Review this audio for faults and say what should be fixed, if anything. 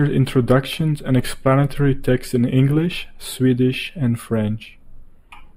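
The speech sounds hollow and dulled in the highs from start to finish. This is channel delay (comb filtering). One channel lags the other by a tiny fraction of a millisecond, which fits a few samples. Summing to mono cancels shared content at evenly spaced frequencies, starting near 7 kHz. To prevent it, align the channels to the sample, or use a single channel, before folding to mono.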